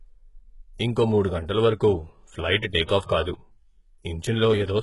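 The speech throughout the clip was likely squeezed through HE-AAC compression at a very low bitrate, consistent with roughly 12 kbps. Only the lower spectrum is truly coded; the treble is synthesised by copying lower bands upward under a coarse envelope, and nothing reaches above 11.4 kHz. The damage is heavy: s sounds come out gritty and lispy, and the top end has a metallic, artificial sheen because its harmonics no longer line up with those below.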